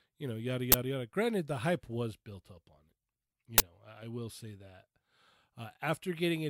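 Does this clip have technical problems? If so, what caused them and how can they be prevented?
Yes. An uninitialised buffer, played before any audio reached it, turns leftover memory into a loud 20 ms noise burst at 0.72–0.74 s and 3.58–3.60 s. Each appears as a block of erratic samples on the waveform and a broadband vertical stripe on the spectrogram. Zero-fill every buffer, or hold playback until it has been written.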